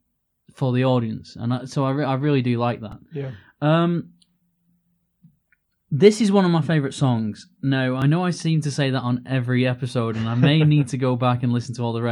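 At 2.92 s, just after "I really do like", a repeated buffer occurs. A slice of about 1.45 ms plays five times, which fits a 64-sample buffer. It gives a brief buzz. At 8.02 s, before "know I seem to", one slice plays twice. That is a click.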